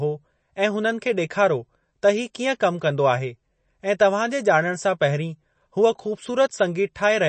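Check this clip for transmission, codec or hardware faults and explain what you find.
Throughout the speech, the sound is watery and swirly, with nothing above about 8.3 kHz. This is likely MP3 compression, consistent with a low bitrate around 32 kbps: the encoder cuts the treble at a fixed frequency and drops weak frequency components, which flicker between frames.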